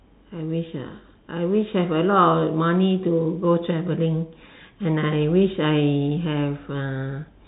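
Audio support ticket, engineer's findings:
No faults found.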